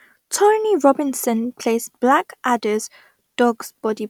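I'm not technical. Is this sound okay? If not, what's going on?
Yes, nothing in this recording points to a technical problem with how the sound was captured or delivered.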